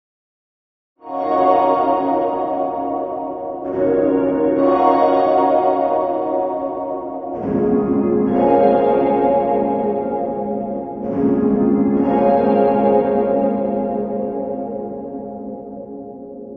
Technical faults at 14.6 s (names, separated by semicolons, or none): none